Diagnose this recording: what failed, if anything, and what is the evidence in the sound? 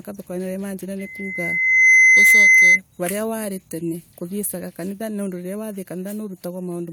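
A pure 2 kHz tone swells over about a second from 0.99 s, dominating the speech until 2.80 s: loudspeaker feedback squeal, with microphone-to-speaker loop gain above one.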